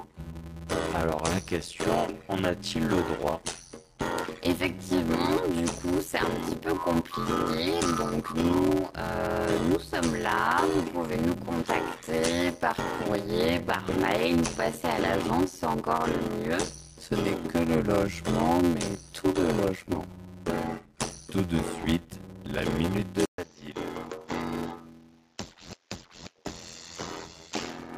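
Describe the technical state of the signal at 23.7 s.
At 23.7 s the signal carries a block size mismatch (padded), present throughout the clip. One stage delivers blocks shorter than the next stage reads, and the remainder of each block is filled with zeros, so a short gap recurs in every block. That produces a buzz at 86.1 Hz, which fits a 512-sample read, and the audio runs at 0.625 of its proper speed while keeping its timbre.

The moment also falls within an input switch to a poorer device, spanning 23.25 s to the end of the clip. The change is likely a move from the original input to a different microphone or a headset's call profile. At the switch there is an 80 ms silence, after which the band is narrower. The sound turns duller and drops about 5 dB in level, over a new noise floor sitting roughly 40 dB below the signal.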